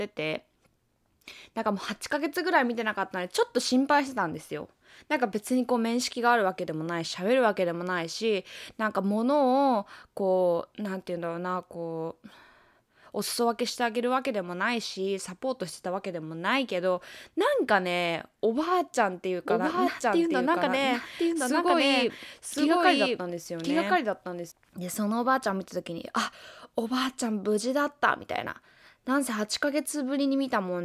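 A speech recording with a doubled audio track from 19.5 to 24.5 s. A second full-band copy trails the original by about a second, at roughly the same level. It starts and stops abruptly, without decay or room colour. A slower parallel capture path is the likely cause.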